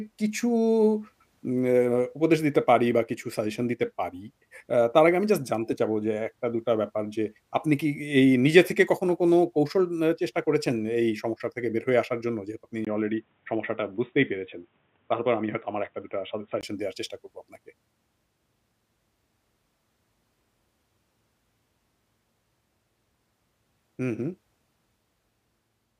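At 12.85 s the speech drops out for about 20 ms and then comes back dull and boxy, with nothing above 3.8 kHz and a faint new background noise sitting far beneath it, though the loudness stays the same. At 16.63 s the full brightness returns. The pattern points to an input switched to a poorer device, likely a different microphone or a headset's narrower call profile, whose limited bandwidth and own noise floor replaced the original source.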